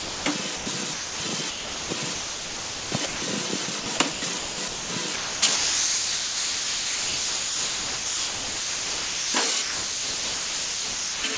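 From 0.0 to 0.26 s, 0.56 to 0.66 s and 0.94 to 1.2 s, the sound drops out. Steady noise fills each gap, lasting 259 ms, 100 ms and 260 ms. The likely cause is sound dropped by the voice detector: the sender judged the audio to be background and stopped sending. Comfort noise played in its place until sending resumed.

Four longer stretches follow: 1.5 to 3.22 s, 3.66 to 4.9 s, 5.16 to 9.34 s and 9.62 to 11.37 s. Here the sound is choppy. Real audio keeps giving way to synthetic noise. The likely cause is sound chopped by the voice detector, switching repeatedly between sending and not sending. Comfort noise replaces about 1.34 s, 0.62 s, 4.04 s and 1.64 s of these stretches. Throughout, the G.722 call path carries nothing above 8 kHz.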